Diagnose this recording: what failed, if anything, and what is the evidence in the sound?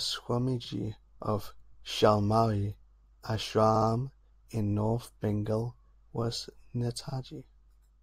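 Repeated frames at the codec or storage stage. The speech stutters at 0.64, 3.75 and 7.08 s. Compressed frames play again, adding time.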